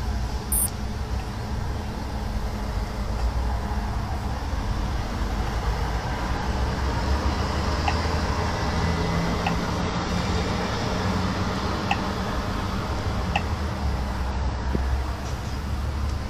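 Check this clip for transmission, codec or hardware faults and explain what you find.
Damaged data in a compressed stream occurs five times: 0.51 to 0.58 s, 3.02 to 3.07 s, 6.37 to 6.42 s, 9.80 to 9.86 s, and a single instant at 14.31 s. At each point corrupted bytes cause the decoder to misread frames and lose sync until it finds the next valid header. Each one is heard as a brief chirp or blip, the first four lasting about 50 to 60 ms. On a spectrogram this shows as a narrow vertical disturbance, and on the waveform as an abrupt discontinuity in the signal.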